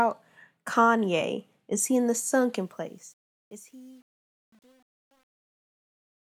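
From 2.54 s to the end at 6.35 s, the speech fade-out shows truncation distortion on a fade. The gain stage rounds each sample to a coarse grid without dither, which fits a 9-bit word length. As the level drops, the waveform collapses into a few square steps, so the tail turns gritty, and from 3.2 s onward it is at its worst instead of thinning out cleanly beneath the smooth fade curve.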